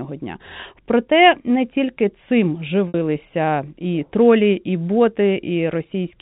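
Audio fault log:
2.88–2.94 s, packet loss with pitch repetition: after "не тільки цим" about 60 ms drops out, fitting two lost packets. The receiver loops the last pitch period, giving a brief buzzy hold. Waveform: identical cycles shrinking; spectrogram: frozen flat harmonics below 4 kHz.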